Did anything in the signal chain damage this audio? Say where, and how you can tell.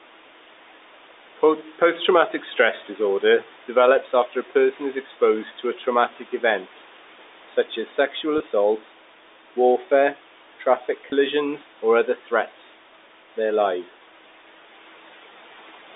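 Yes. The call processing's noise suppressor bit into the speech twice, from 5.45 to 5.86 s and from 6.09 to 6.43 s. Roughly a tenth of a second in each stretch gets pulled down by about 8 and about 9 dB. The suppressor treated soft speech as background, so those bits sound swallowed.

There's also packet loss with pitch repetition at 8.38 s and at 11.1 s, the second right after "warfare traffic". Each gap is 20 ms, which fits a single lost packet. The receiver repeats the last pitch period to cover it, so you hear a brief, slightly held buzz.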